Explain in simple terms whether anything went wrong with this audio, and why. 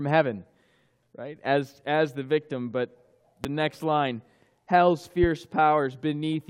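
Two loud pops cut in, one at 3.44 to 3.47 seconds and another at 5.24 to 5.26 seconds. Each is a single sharp thump, much louder than the surrounding audio, lasting only a fortieth of a second. The likely cause is a sudden electrical jolt, such as a plug being nudged, a switch, or static, reaching the equipment. Unlike a dropout, nothing goes missing: the sound continues underneath each pop.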